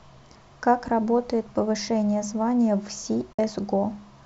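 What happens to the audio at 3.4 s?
At 3.33 to 3.39 s the sound drops out in AAC frame loss with muting: about 60 ms, which fits six lost frames in the likely low-delay AAC stream, decoded as silence. Overlapping windows fade the edges, leaving a soft-edged hole.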